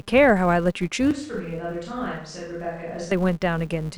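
Throughout the speech runs a steady 200 Hz buzz from a filter restarted on every block: the filter discards its state at each block boundary and starts from silence, so each block opens with a small transient, and these ticks fuse into a buzz that rises and falls with the speech level.

From 1.11 s to 3.12 s the sound turns hollow and roomy, drops about 5 dB with thinner bass, and gains background noise around 35 dB below the speech, with abrupt changes in and out. This is likely a switch to a distant microphone after the close one dropped out.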